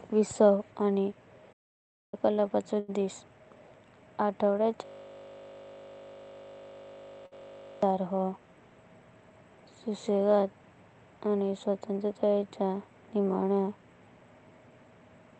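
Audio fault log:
1.52 to 2.14 s, playback stall: right after "विसावा आनी" the output falls silent for about 0.6 s, then resumes where it stopped. The player most likely ran dry of data or had its thread blocked, so nothing reached the output until it recovered.
2.79 s and 7.26 s, short stall from a late packet: a sound is held too long, about 88 ms the first time and 55 ms the second, then continues with nothing lost. Each time the jitter buffer emptied and the receiver stretched the last sound until the packet arrived.
4.85 to 7.83 s, system hang loop: the same 20 ms piece of audio repeats 146 times, giving a steady 50 Hz buzz instead of speech. The system froze while the sound hardware kept cycling through one small ring buffer, replaying its contents exactly.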